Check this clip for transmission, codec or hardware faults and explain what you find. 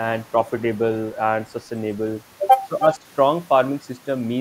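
Two faults from echo handling, both brief and close together in this speech clip.

From 2.80 to 2.86 s there is an echo leak. An echo canceller on a loudspeaker side likely failed to subtract everything its microphone picked up, so part of the speech was returned. The result is a short, faint repeat of the voice trailing it by 316 ms and sitting around 10 dB below the direct speech.

From 2.95 to 3.04 s the speech is suppressed in double talk. With both sides active at once, the echo canceller likely could not tell the local talker from loudspeaker echo and attenuated everything it heard. The voice dips by around 10 dB for roughly a tenth of a second, sounding momentarily pulled back before recovering.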